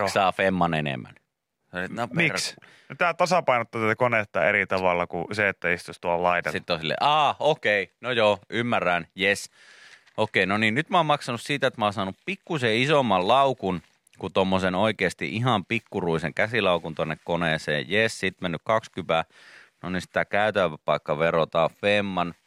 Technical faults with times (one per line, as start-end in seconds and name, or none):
none